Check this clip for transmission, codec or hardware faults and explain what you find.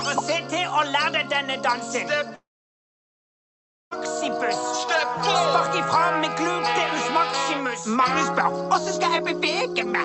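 One fault stands out: a long network dropout from 2.35 s to 3.93 s. The sound breaks off and the gap lasts about 1.56 s. At the break, the receiver briefly carries the last sound forward as a fading buzz or hiss. Within a tenth of a second that fill dies away, leaving near silence for roughly 1.5 s. The likely cause is lost packets that never arrived. The audio resumes without the missing stretch. Throughout the clip, the call codec's top end stops near 8 kHz.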